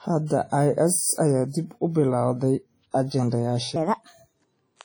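From the start the speech carries heavy WMA compression, most likely: a washy, ringing smear around each sound and a hiss that swells and fades with the level, which fits a low bitrate around 32 kbps zeroing out the weaker detail.

At 3.76 s, and running to the end at 4.84 s, a section at the wrong speed kicks in. It plays 1.38 times too fast, so the voice jumps up by about five semitones and sounds rushed. The likely culprit is that stretch being played back against the wrong clock.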